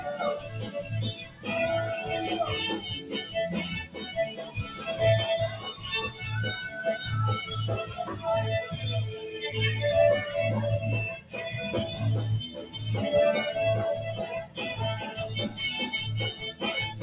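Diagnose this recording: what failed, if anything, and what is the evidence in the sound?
Failure stage: call processing. A noise suppressor meant for speech is running on non-speech sound. Through the whole clip it treats sustained tones, ambience and decays as noise, so the level swings by roughly 10 dB as its gain moves. On a waveform the envelope pumps, with onsets intact and held portions sagging. On a spectrogram, steady horizontal bands fade and tails end early against a hard ceiling at 4 kHz. That ceiling comes from the call codec, which sounds consistent with G.711 mu-law at 64 kbps.

The sound cut by the noise suppressor shows up as distinct dips at 0.39–1.47 s, 3.0–4.87 s, 6.09–6.24 s, 7.88–8.24 s, 11.18–11.36 s, 11.9–12.79 s, 14.42–14.59 s, and from 16.33 s to the end. The deepest drops are about 12 dB, about 10 dB at 11.9 s, and about 8 dB at 6.1 s and 7.9 s. In each stretch the suppressor classified the sustained or decaying material as noise and attenuated it. 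A waveform shows notches or an early collapse of the envelope, and a spectrogram shows darkened patches where energy should continue.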